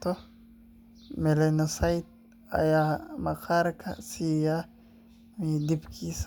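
Nothing in this bit of speech points to a technical fault; every moment of it sounds just as it should.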